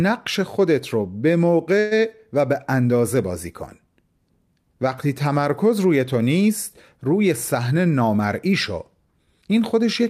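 Speech clip with two timing faults on the receive side. From 1.79 to 1.93 s the sound stops advancing and the last instant is held as a short buzzy, fading continuation lasting 118 ms, with no drop to silence. It then resumes exactly where it left off, so nothing is lost but the stream now runs 118 ms later. This is a call audio freeze, likely caused by delayed packets leaving the jitter buffer empty until they arrived. From 7.57 to 8.72 s the speech runs at about 109% of normal rate while the pitch stays unchanged, so that stretch sounds hurried. This is a jitter buffer speed-up. With more audio queued than it aims to hold, the receiver repeatedly cut out short pitch-period-sized pieces, removing roughly a tenth of a second in total to bring the delay back down.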